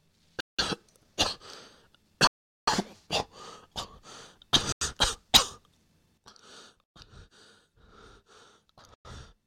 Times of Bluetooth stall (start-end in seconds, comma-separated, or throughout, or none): 0.40-0.59, 2.27-2.67, 4.72-4.81, 6.84-6.96, 8.94-9.05